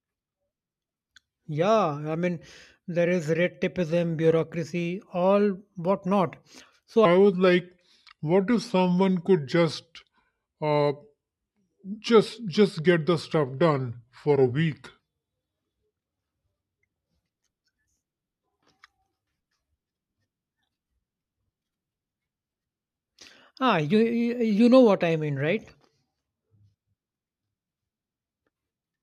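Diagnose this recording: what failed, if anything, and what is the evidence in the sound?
A section at the wrong speed runs from 7.05 s to 15.0 s, where the speech plays at 0.82 times its proper rate, sagging about three semitones lower and sounding slow and heavy before snapping back. The likely cause is an editing or playback stage reading that stretch against the wrong sample clock. On a spectrogram, harmonics and formants shift downward as a block at 7.05 s; the waveform shows syllables visibly stretched until 15.0 s.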